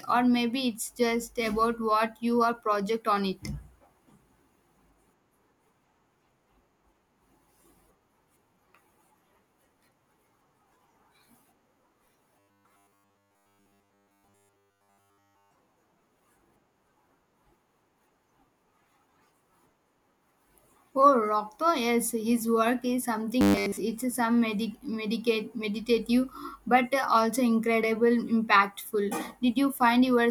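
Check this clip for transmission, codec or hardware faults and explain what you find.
There's one fault here, robotic sound from repeated short buffers, at 12.39 to 15.51 s and again at 23.41 to 23.77 s. The speech becomes a rigid metallic buzz at 100 Hz, likely from a stalled stream replaying a 10 ms chunk. The first stretch is entirely buzz, and the shorter second one is mostly buzz.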